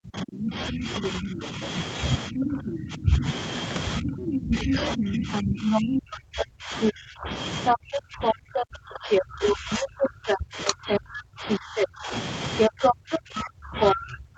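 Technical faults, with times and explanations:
Throughout: speech suppressed in double talk. The talker's level keeps sagging and breaking up, with the deepest dips around 30 dB down. That's likely the echo canceller losing track of which sound was the talker and which was loudspeaker echo, so it turned everything down.
0.45–2.73 s and 4.34–14.37 s: other side's voice leaking through. A second voice sits in the mix, roughly as loud as the talker in the first stretch and somewhat louder in the second, which runs to the end. It's likely residual loudspeaker echo the canceller never removed.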